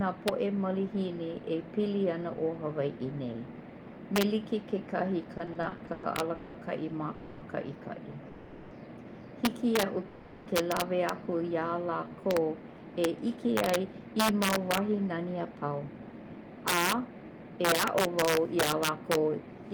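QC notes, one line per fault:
Throughout: integer overflow. Loud peaks, driven about 8 dB past the limit, wrap to the opposite sign, so a small fraction of samples snap across the full range. Each one makes a violent crack, harsher than clipping, and shows as vertical spikes in the waveform with broadband streaks on the spectrogram.
5.37–6.56 s: repeated stalls (stutter). The buffer ran dry nine times and each gap was filled by continuing the last sound, 430 ms in total, with the longest at 190 ms. About a third of the span is concealment, so the audio drags and stutters. Smeared, repeated harmonic blocks are visible between onsets.
7.14–7.43 s, 8.28–8.73 s, 10.08–10.48 s: call audio freeze. Three holds of 270 ms, 430 ms and 380 ms were filled with a fading buzz continuing the last sound, likely from packets held up in transit. Nothing is lost, and the audio resumes where it stopped. On the spectrogram these appear as flat, decaying horizontal bands.
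11.30–12.41 s: jitter buffer slow-down. Repeated pitch periods added 144 ms, so playback runs at 88% speed at unchanged pitch and sounds drawn out. The spectrogram shows stretched harmonics, and the waveform shows near-identical repeated cycles.
13.62–19.71 s: jitter buffer speed-up. Short pitch-period pieces were cut to shed excess delay, roughly half a second in total, so playback runs at 109% with unchanged pitch and sounds hurried. Syllables appear compressed in time.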